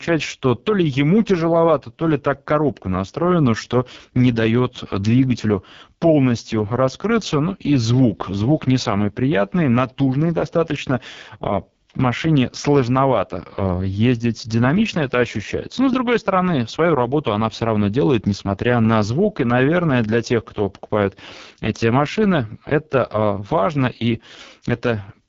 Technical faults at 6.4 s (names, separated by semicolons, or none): AMR wideband (HD Voice) codec